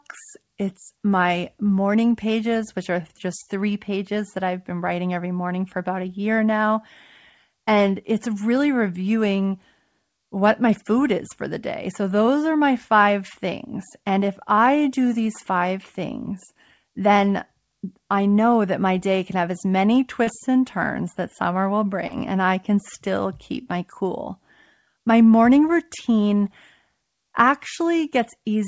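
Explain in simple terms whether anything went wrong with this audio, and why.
Two brief glitches interrupt the speech: a quick smear just after "can have as many", around 20.24 to 20.30 s, and another after "turns that summer will", around 22.07 to 22.15 s. Both are short concealed packet loss. About 30 milliseconds of the call arrived too late each time, so the receiver patched the gap by stretching the preceding sound and then blended back into the real audio. The second patch also dropped a tiny sliver of sound. The call line itself cuts everything above 8 kHz.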